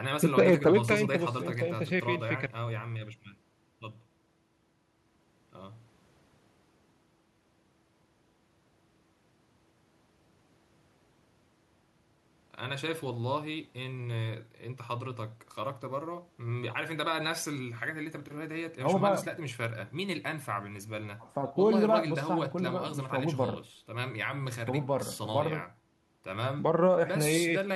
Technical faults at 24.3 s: none

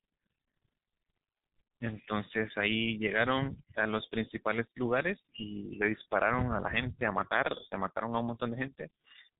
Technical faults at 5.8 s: G.723.1 codec

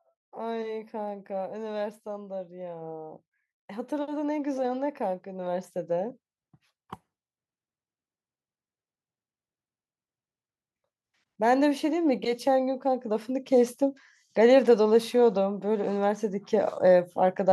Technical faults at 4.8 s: automatic gain rising

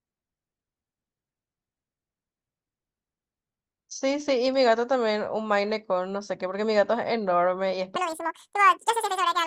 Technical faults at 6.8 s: none

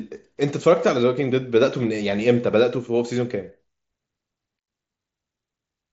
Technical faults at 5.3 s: none

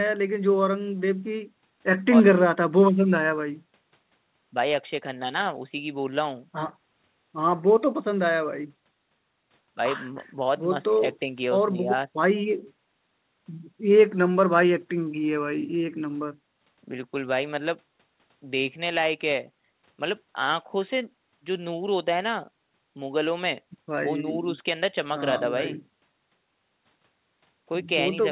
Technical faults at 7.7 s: none

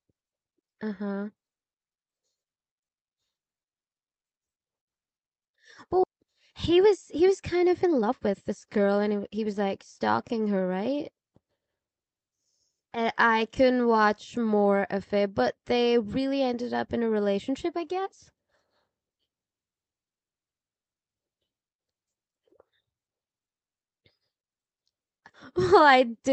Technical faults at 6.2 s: jitter buffer speed-up

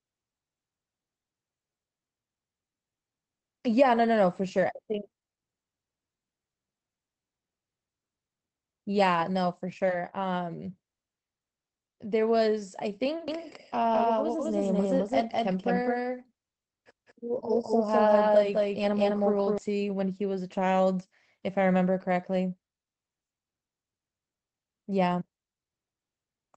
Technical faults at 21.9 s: none

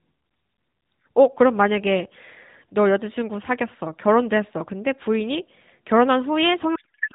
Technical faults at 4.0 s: none

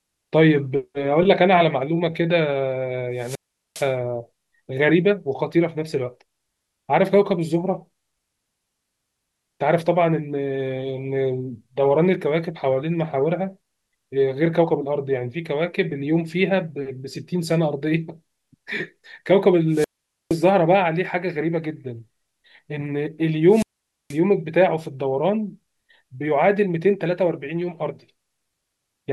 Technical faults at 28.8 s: none

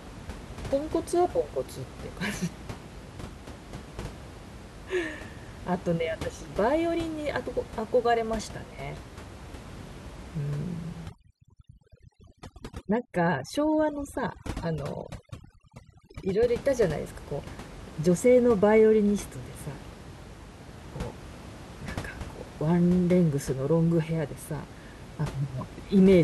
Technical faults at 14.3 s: overdone noise removal

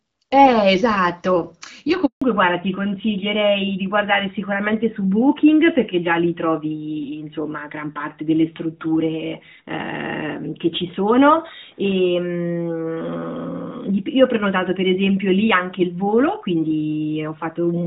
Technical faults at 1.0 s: none

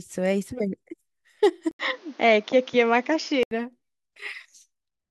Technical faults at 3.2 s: input switched to a poorer device

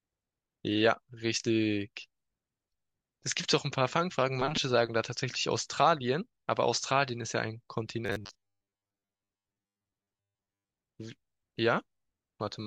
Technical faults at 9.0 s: robotic sound from repeated short buffers

